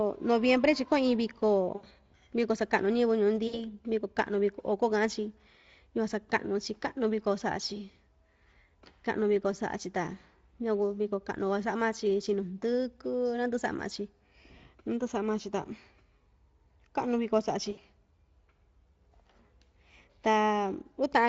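Speech with brief fading smears at 1.75–1.86 s, 3.47–3.72 s and 17.71–17.80 s: VoIP packet loss concealed by the speech codec, which stretched its last sound across 80 ms and then 60 ms gaps. The underlying Speex coding adds only light coding damage.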